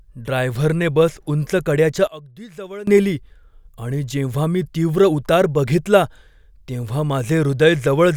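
One channel inverted, 2.07 to 2.87 s: the speech drops by about 20 dB, likely because reversed polarity on one side cancels the shared centre signal when summed to mono.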